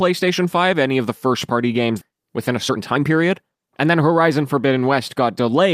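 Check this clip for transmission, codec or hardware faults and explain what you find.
Two transmission faults show up.

Between 2.01 and 2.03 s there is a skip ahead. Roughly 0.7 s of speech was discarded while later audio was already queued, so playback jumps forward with no gap. The speech on either side is butted together and a chunk simply vanishes.

From 2.11 to 4.28 s comes a jitter buffer speed-up. The buffer held more audio than its target, so the receiver repeatedly trimmed short pitch-period slices, about 0.3 s in total. The speech runs at 114% speed at unchanged pitch and sounds hurried.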